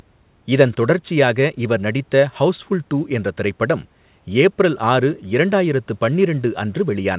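Nothing's actually wrong with this bit of speech: it came over a call line, and the way everything tops out at 4 kHz fits a G.711 mu-law telephone codec, which is just how that kind of connection normally sounds.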